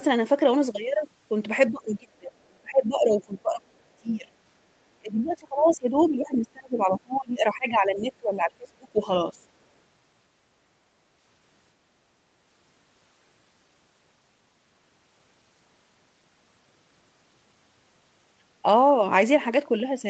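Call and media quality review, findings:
Speech suppressed in double talk, 1.71–4.28 s. Talker audio ducks and breaks up. Deepest dip around 30 dB, about two seconds lost in pieces. Likely the echo canceller could not separate near talker from loudspeaker echo, so it attenuated both.

Speech suppressed in double talk, 4.99–9.08 s. Same symptom, longer. Dips reach around 25 dB. Roughly four seconds chopped. Likely the same suppressor clamping down while both sides overlap.

Speech suppressed in double talk, 9.32–9.41 s. Brief dip of about 10 dB. Likely a short echo-canceller gating event.

Other side's voice leaking through, 5.67–5.75 s. Short scrap of a second voice, about 25 dB under the talker. Likely residual loudspeaker echo the canceller failed to strip from the microphone.

Other side's voice leaking through, 6.0–6.1 s. Second scrap, similar level. Falls inside the 4.99–9.08 s suppression window. 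Likely the same echo-canceller miss.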